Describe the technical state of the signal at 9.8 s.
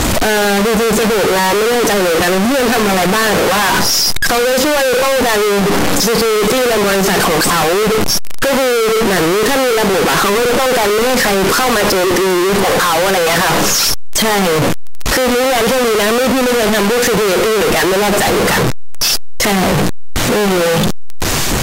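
At 9.8 s, as across the whole clip, the speech is blasting and harsh, noise as loud as the voice, pitch still traceable: likely float read as integer, 32-bit float samples interpreted as 32-bit integers.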